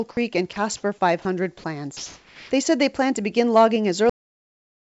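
Speech recorded over a call link, band-limited with nothing above 8 kHz as a wideband codec such as G.722 would leave, has sound dropped by the voice detector in five places: 0.11 to 0.17 s (60 ms), 0.53 to 0.56 s (30 ms), 1.22 to 1.25 s (30 ms), 1.58 to 1.64 s (60 ms), and a longer gap from 1.97 to 2.51 s (540 ms). In each, the speech gives way to steady noise or near silence before resuming. The likely cause is that the sender's activity detector judged quiet or trailing speech to be background and stopped transmitting, so the receiver filled in comfort noise. On a spectrogram these gaps show as smooth, featureless noise or near-empty stretches where harmonic and formant structure should be, and on the waveform as low, even-amplitude stretches. The clip also has a cut-off end at 4.10 s, just after "plan to begin logging". The audio stops mid-sound with no decay and drops straight to digital silence for the remaining time, because the final buffers were never written. 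The waveform shows an abrupt vertical edge followed by a flat line, and the spectrogram shows a hard vertical boundary with nothing after it.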